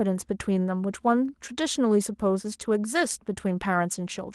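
The speech signal carries no technical faults, with the Opus voice coding at 24 kbps in its hybrid mode keeping the full band and leaving only light traces of compression.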